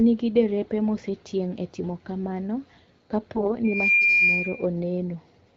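From 3.35 to 3.52 s the speech turns hoarse, scratchy and gargly while keeping roughly its pitch and level. These are AMR bit errors: on a weak link, the less protected bits in a short run of frames, which fits about six 20 ms frames, arrived flipped at a fairly high rate. The checksum over the important bits still passed, so the decoder used the frames, misplacing the excitation pulses and skewing the finer pitch, gain and spectral values. Because level and pitch stay intact, this reads as corrupted detail rather than dropout or concealment.

At 3.64 s a loudspeaker feedback squeal begins, a single tone at 2.4 kHz that swells over about a third of a second and holds, roughly 5 dB above the speech, until 4.66 s. The microphone is picking up the loudspeaker it feeds, and at that one frequency the loop gain exceeds one, so the tone grows by itself. Its steady pitch and gradual build separate it from codec noise or a clipped burst. 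The wideband codec itself adds only light damage.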